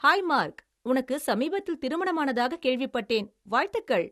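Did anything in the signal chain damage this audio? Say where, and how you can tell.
Yes. The speech sounds dull throughout, with nothing above 12.3 kHz. At the codec stage this is likely low-bitrate audio saved at a high bitrate, keeping the earlier cut-off.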